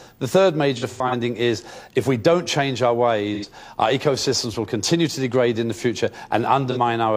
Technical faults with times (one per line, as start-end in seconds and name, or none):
0.77-1.14 AAC frame loss with concealment
3.34-3.45 AAC frame loss with concealment
6.71-6.77 AAC frame loss with concealment